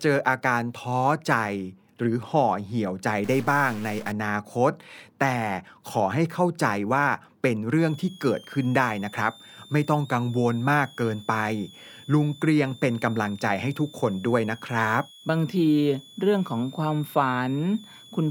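From 3.24 to 4.12 s the speech turns harsh and buzzy. This sounds like a stuck bit, likely a data line or converter bit held at one value. Many samples jump by a fixed step, around -40 dBFS. Quiet gaps fill with noise.

At 7.79 s a switching supply whistle starts and lasts to the end. It is a thin, high tone, sitting some 25 dB below the speech. Its pitch wanders between 3.1 and 3.8 kHz as the supply's load shifts.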